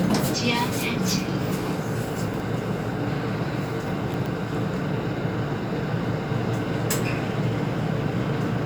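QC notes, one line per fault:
2.28–2.40 s and 4.14–4.26 s: chunks out of order. Each time a 60 ms chunk lands one slot late, swapping places with the chunk after it. Nothing's missing, but the brief jumbled stretch has three hard joins, so you hear a quick scramble.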